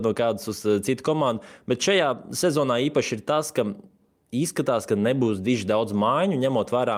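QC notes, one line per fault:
No faults heard anywhere in this speech recording.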